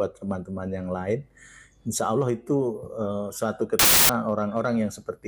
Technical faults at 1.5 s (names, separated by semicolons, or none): none